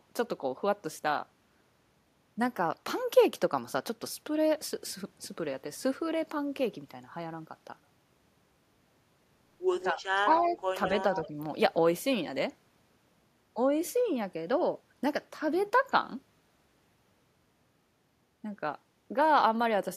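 Around 9.8 to 9.95 s there's an echo leak, a delayed copy of the speech trailing it by 183 ms, about 10 dB under the talker. That's likely the far end's echo canceller letting loudspeaker pickup slip back. Right on its heels, 9.93 to 10.01 s, the talker dips a few dB. That's speech suppressed in double talk, likely because the canceller couldn't separate the talker from the echo and turned both down. Another faint echo scrap follows at 10.16 to 10.21 s, about 30 dB down. From 10.25 to 10.57 s the suppression bites harder, the speech sagging by up to about 10 dB, with an echo scrap about 15 dB down at 10.4 to 10.45 s. One last echo fragment, about 20 dB down at the same 183 ms lag, turns up at 11.23 to 11.28 s.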